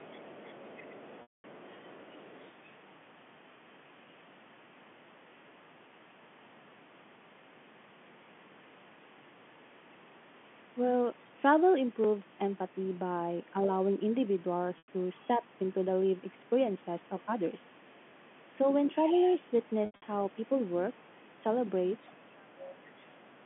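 Telephone speech, carried cleanly in G.711 mu-law within a 150 Hz to 3.4 kHz line band, with three kinds of fault. The other side's voice leaking through is heard from 0.0 to 2.7 s at about 25 dB below the talker. It returns briefly at 15.2 s at roughly 35 dB down, and from 18.98 to 19.33 s and 21.96 to 22.15 s at around 15 dB down. A last scrap comes from 22.84 to 23.05 s at about 30 dB down. The likely cause is an echo canceller leaving loudspeaker sound in the microphone. Packet loss with pitch repetition fills three gaps. The first runs from 1.22 to 1.44 s, 220 ms lost, long enough that the repeated pitch period fades toward silence before speech cross-fades back. A 100 ms loss at 14.78 to 14.88 s also fades into silence before speech returns. From 19.86 to 20.02 s, 140 ms are lost in pieces, the longest run 80 ms. Speech suppressed in double talk follows the leaks. From 22.17 to 22.83 s the talker dips by around 25 dB. 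From 23.08 to 23.4 s it drops by around 20 dB. Both sides seem to be talking at once there, and the canceller turns the near voice down along with the echo.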